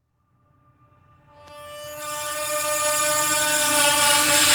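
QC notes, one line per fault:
No faults found.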